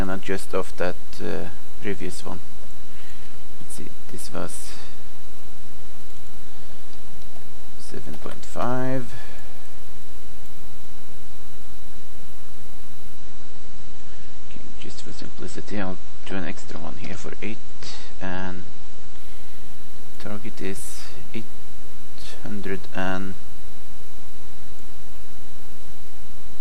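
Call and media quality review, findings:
Adaptive stream at a lower bitrate, 13.17–19.17 s (6 s). Sudden, gapless loss of treble: nothing above 8.3 kHz, with swirly, smeared codec artefacts. Full bandwidth returns abruptly at 19.17 s. Probable component: adaptive streaming player switching renditions after a throughput dip. The sound points to a step from an MP3 rendition around 128 kbit/s down to one near 30 kbit/s. The encoder low-passes and quantises harder to fit the reduced bitrate.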